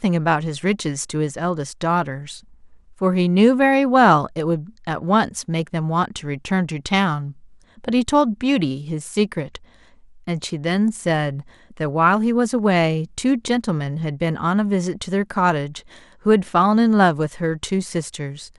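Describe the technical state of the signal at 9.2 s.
MP2 compression runs throughout, making the speech at 9.2 s dull and gurgling. Upper sub-bands, likely starved at about 80 kbps, blink on and off across the spectrogram.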